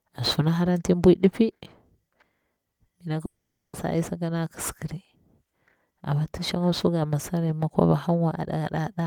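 A speech recording with one long network dropout, from 3.25 to 3.76 s. The sound at 3.25 s does not stop cleanly. It smears into a short fading buzz, and then silence holds for about 0.43 s. At 3.76 s the speech resumes mid-flow, with about 0.48 s of it gone for good. The likely cause is a run of packets that never reached the receiver. The receiver stretched the last audio briefly, then gave up and played silence.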